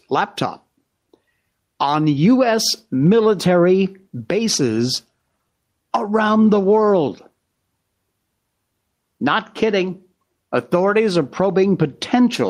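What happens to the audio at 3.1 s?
Gain pumping, present throughout the clip: the gain ducks around 10 dB under loud sounds, likely from a fast limiter fighting excess gain, leaving a flattened, breathing waveform envelope.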